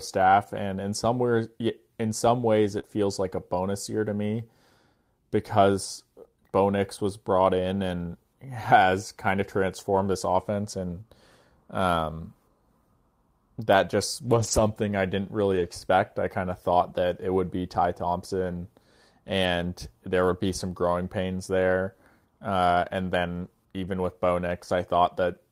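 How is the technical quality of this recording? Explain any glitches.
The recording has two kinds of network-related glitch, both from packets lost in transmission and repaired at the receiver.

Lost packet rebuilt from error correction occurs seven times: 1.61–1.63 s, 2.83–2.89 s, 9.97–9.99 s, 14.23–14.61 s, 15.55–15.65 s, 19.43–19.45 s and 23.41–23.47 s. The rebuilt stretches last 20, 40, 20, 200, 60, 20 and 40 ms. Each missing packet was replaced by a low-bitrate copy carried in the following packet, so there is no gap, but these frames sound rougher and noisier. The longest, at 14.23 s, points to a run of roughly ten consecutive 20 ms packets.

Short concealed packet loss appears at 2.79–2.85 s, overlapping the start of the rebuilt section at 2.83 s. About 40 ms arrived too late for decoding, and the receiver filled 37 ms of it by extending the preceding sound, either from its pitch or as shaped noise, before crossfading back to real audio. 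It is heard as a brief smear or wobble.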